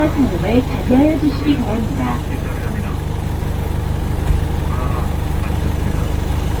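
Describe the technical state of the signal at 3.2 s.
At 3.2 s the sound carries generation loss, present across the whole clip rather than at that moment alone. The texture is swirly and hollow, with smeared transients and blurred attacks. Content still reaches about 20.2 kHz, so the damage is not a simple band limit. The likely cause is repeated lossy coding, around seven passes, consistent with an Opus chain near 48 kbit/s. Each pass quantises on a shifted frame grid, so noise piles up.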